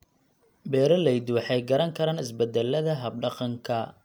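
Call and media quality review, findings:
No faults found in the speech recording. Nothing audible requires follow-up on this ticket.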